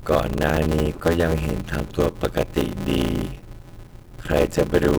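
A block size mismatch (padded) runs throughout: shorter blocks are zero-filled to fit reads that suggest 512 samples, giving an 86.1 Hz buzz and speech slowed to 0.625 times speed with its timbre intact.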